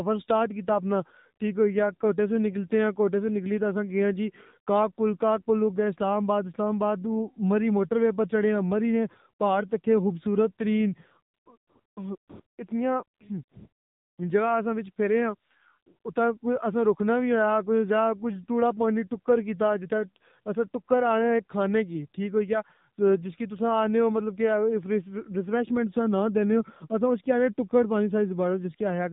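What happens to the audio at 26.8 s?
At 26.8 s the speech carries AMR narrowband mobile codec damage, present throughout: buzzy, synthetic pulse-driven voicing that fits roughly 7.4 kbps, and a spectrogram cut flat at 4 kHz.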